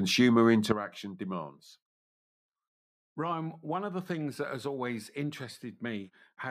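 A speech recording that drops abruptly in level at 0.72 s and stays down to the end, a sudden gain jump of about 11 dB. The speech and the background noise fall together in a single step, likely from a digital gain change applied from one sample to the next with no ramp. On a waveform the envelope narrows sharply at that instant, and on a spectrogram every frequency band, noise floor included, darkens along the same vertical line.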